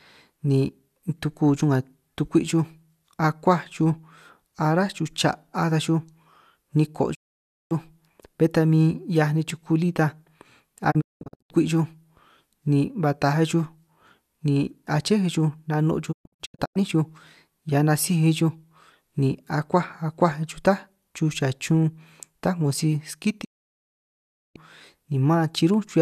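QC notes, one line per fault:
7.13–7.73 s, 10.90–11.52 s, 16.11–16.77 s, 23.43–24.57 s: digital broadcast dropout. Failed frames make the receiver mute, fading out within 20 ms. The first and last leave solid 0.55 s and 1.1 s gaps. The middle two scatter short holes, the longest 0.19 s and 0.12 s. Lost audio never returns.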